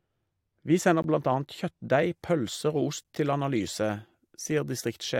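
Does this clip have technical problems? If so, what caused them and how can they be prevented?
Yes. Two kinds of fault are audible.

De-emphasis applied wrongly: from the start to about 2.02 s, the speech sounds dull and muffled, because a treble-cut filter meant to reverse pre-emphasis was applied to audio that had none, or was applied twice. The high end slopes smoothly downward, reaching about 8 dB below the 1 kHz level at 10 kHz. On a spectrogram, the upper bands look faded for those first two seconds, then brighten abruptly. Prevention: apply de-emphasis only when the source is known to carry matching pre-emphasis, and only once in the chain.

Gap between stream segments: short holes of silence with hard edges cut the sound at 1.02 s (about 17 ms) and at 3.04 s (about 10 ms). The two gaps are about 2 s apart, which fits 2-second segments whose timestamps don't quite meet, so the player fills the space with silence. 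No audio is lost, but the flow stutters. On a waveform, each gap is a flat line with vertical edges, and on a spectrogram it is a thin blank column. Prevention: make each segment's timestamps start exactly where the previous one ends.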